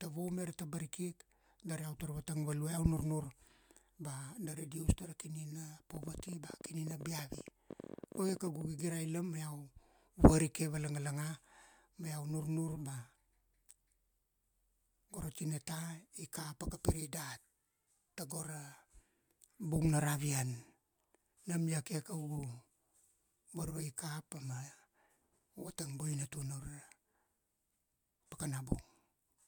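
A speech clip with a train of clicks from 5.95 to 8.62 s: about 15 unevenly spaced pops per second, some forty in all, peaking roughly 5 dB above the speech. The likely cause is interference from nearby equipment or a faulty connection or power supply.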